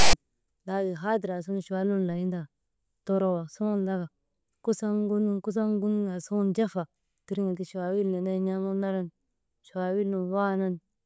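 At the very start, from 0 to 0.13 s, a harsh, lopsided rasp with abrupt edges cuts in just before "laatiŋ haadir". This is file tags played as audio: a block of text metadata was decoded as sample values, and its byte patterns produce that offset buzz.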